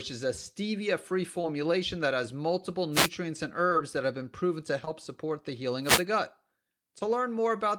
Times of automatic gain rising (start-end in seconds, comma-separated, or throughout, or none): none